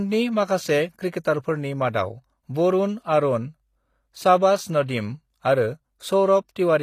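From start to finish the speech carries HE-AAC compression damage that is plainly audible, likely from a low-rate encode of around 24 kbps. The lower band is coded directly, while the treble is synthesised by copying lower bands upward, so s sounds come out gritty and metallic. On a spectrogram the upper region looks like a smeared, repeated copy of the band below, with harmonics misaligned at the crossover, and nothing appears above 14.9 kHz.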